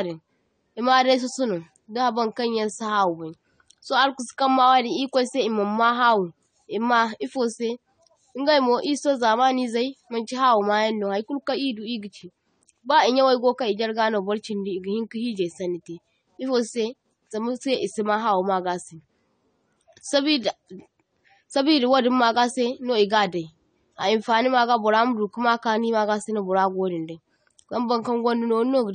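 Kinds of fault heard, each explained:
AAC compression: the speech carries plainly audible codec damage throughout, dull and smeared, with a warbling, fizzy texture on sibilants and held vowels, which fits a low bitrate around 32 kbps. Frame by frame, the likely encoder quantises its spectral lines coarsely and lowers the upper band limit to save bits. On a spectrogram this appears as a hard, low cut-off, gaps and blotchy patches in the upper bands, and smeared consonant onsets. The waveform itself shows little.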